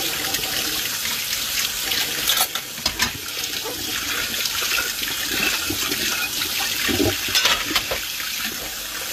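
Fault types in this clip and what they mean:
HE-AAC compression: The top end here sounds rebuilt rather than captured, which is most likely HE-AAC doing its spectral band replication trick. The lower band gets coded properly, then copies of it are shifted upward and shaped to fill the treble, so the highs stay bright but their detail doesn't line up with what's below. The damage is plainly audible, with a grainy, metallic edge up top, nothing above about 14.9 kHz, and an overall character that fits a low rate around 24 kbps.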